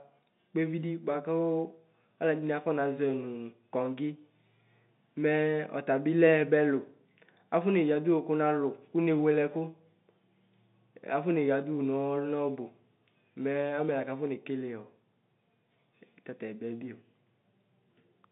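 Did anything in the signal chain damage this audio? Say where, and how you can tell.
No, none of the stages in the chain has damaged this speech. What can be heard is the G.711 telephone coding working as intended: the sound sits in a line band of roughly 150 Hz to 3.7 kHz with nothing above 3.8 kHz, as expected of a 64 kbps mu-law telephone path.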